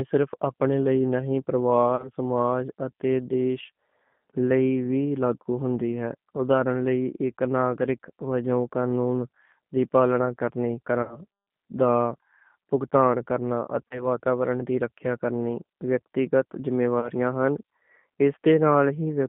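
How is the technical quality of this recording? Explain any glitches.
The recording is poor: the whole clip has band-limited, coded telephone quality, and four short dropouts are patched over by the decoder.

Throughout, the speech sounds thin, slightly rough and synthetic. The band runs only from about 150 Hz to 3.5 kHz, and the coding damage is plainly audible. This is the G.729 codec, and the sound fits G.729A at 8 kbit/s. It rebuilds each 10 ms frame from a vocal-tract filter, a pitch predictor and a few pulses, so fine detail and everything above 4 kHz are lost.

Four brief spots turn buzzy or noisy and then fade: 1.96 to 2.10 s, 11.02 to 11.21 s, 13.88 to 14.07 s and 17.00 to 17.10 s. This is VoIP packet loss concealed by the speech codec. About 30 ms of audio is missing at three of these points and 60 ms at 11.02 s, which fits one or two lost packets. The decoder fills each gap by stretching its last pitch and filter at falling gain. 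Because each frame depends on the one before, the sound stays weak or smeared for a short while after the real audio resumes. That is why each disturbance lasts longer than the gap itself.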